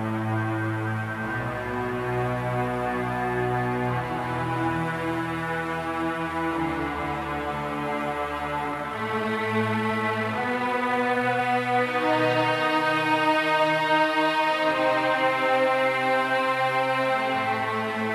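From 8.62 s to 11.42 s there's a time-stretched section where the pace suddenly jumps to about 1.91 times normal speed. The pitch doesn't move at all, so it sounds rushed rather than chipmunky. That combination likely means software squeezed this stretch to fit a shorter length, holding the pitch by dropping short pieces of the audio as it went. At 11.42 s the pace snaps back to normal just as abruptly.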